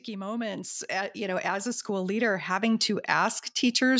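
From about 0.05 s right through to 3.95 s there's automatic gain rising: the gain control decided the input was too quiet and kept nudging its gain up, about 12 dB in all, so the speech and the background swell together steadily across the clip, all within the call path's 8 kHz bandwidth.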